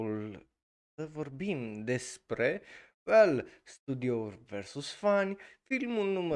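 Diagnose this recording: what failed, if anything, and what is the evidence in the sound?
Nothing failed; no faults heard.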